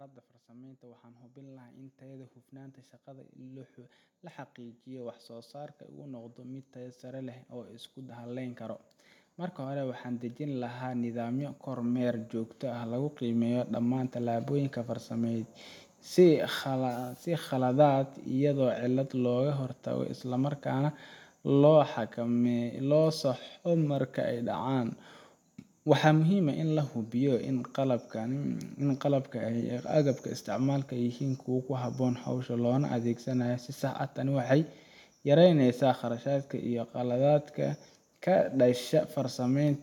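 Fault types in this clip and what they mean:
Automatic gain rising: the gain control judged the speech too quiet and raised its level. Voice and background swell together by about 25 dB from 0.47 to 19.87 s.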